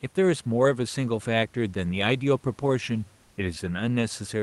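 It's a speech clip, and from 3.21 to 3.37 s the room background gets swapped for comfort noise, a flat, featureless hiss at the same level, likely from Opus DTX pausing transmission.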